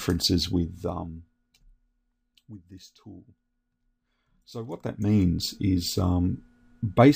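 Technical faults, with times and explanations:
4.53 to 5.22 s, zipper noise: a level change of roughly 20 dB is applied in discrete jumps, around 150 per second, instead of as a smooth ramp. Each abrupt jump puts a small discontinuity into the waveform, and that many clicks in quick succession over these 0.7 s merge into a ticking, zipping texture that rides on top of the sound while the gain moves.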